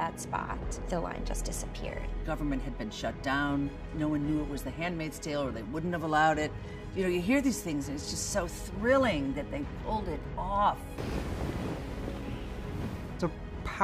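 Nothing here calls for comment, since the audio runs its whole course without any technical fault turning up along the way.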